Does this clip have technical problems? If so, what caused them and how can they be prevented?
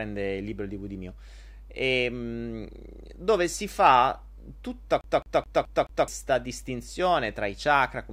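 Yes. A scratch made the CD player stick on one turn, throwing the laser back one track each revolution from 5.01 to 6.08 s. The same 214 ms of speech repeats five times, each jump marked by a brief mute, giving a fast, even stutter. Cleaning or resurfacing the disc, or ripping it to a file with an error-correcting drive, prevents this.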